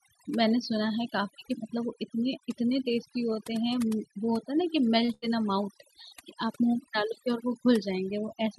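Overdone noise removal affects the whole clip. A noise reduction stage set far too strong has pushed individual frequency bands down or out entirely whenever they sat close to its noise estimate, and the quieter parts of the speech were swept away with them. Between phrases the background drops and breaks up into twinkling specks.

A short stall from a late packet follows at 5.05 to 5.11 s. A packet arrived late and the jitter buffer ran dry, so the receiver stretched the last sound by about 25 ms while it waited, then picked up exactly where it had paused. Nothing is lost. A sound simply hangs on slightly too long, with a faint buzz or dip as it is held.

A burst of packet loss comes right after, at 5.14 to 5.25 s. This time the audio never arrived in time to be played. The receiver filled roughly 81 ms by carrying the last sound forward and letting it fade, so it turns into a held buzz or a dying hiss rather than going silent. 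When playback resumes, it has jumped ahead, and about 60 ms of the original speech is gone. The call path's own high-frequency ceiling near 12 kHz, which fits Opus at around 48 kbps, sits beneath all of this.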